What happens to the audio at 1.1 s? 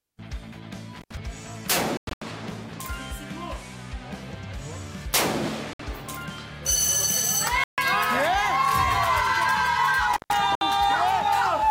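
That's an intermittent contact, running from about 0.96 to 1.15 s. A loose plug or cable connection briefly opens, so the sound drops out for roughly 87 ms, with crackle at the edges of the gap and faint hiss while the line is open.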